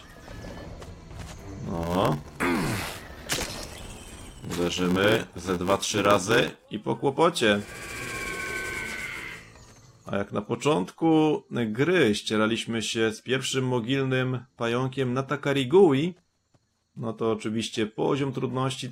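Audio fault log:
1.73–6.65 s, block size mismatch (padded): zero-filled gaps close each block, which fits a 512-sample read, giving an 86.1 Hz buzz and 0.861× slower audio; the waveform shows evenly spaced dropouts.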